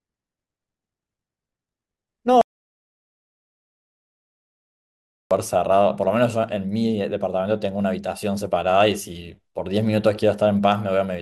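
An audio dropout to silence runs from 2.41 s to 5.31 s in this speech, a gap of about 2.9 s. The speech breaks off mid-flow and the signal falls to silence, with no room tone or background hiss underneath, then resumes just as abruptly. That dead-flat gap most likely means the input was lost, through a disconnected device, broken link or accidental mute, while recording continued and wrote silence. Whatever was spoken in that stretch is missing.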